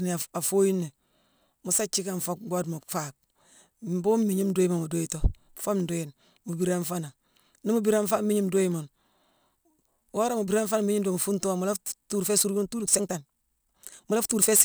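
A time-stretched section runs from 12.17 s, just after "fuungh too mu", to the end of the clip at 14.65 s. Here the speech suddenly plays about 1.36 times faster while its pitch stays where it was, so it sounds rushed rather than higher. The likely cause is software squeezing this stretch to fit a shorter length, holding pitch steady by dropping short slices of the waveform, which leaves the abrupt jump in pace.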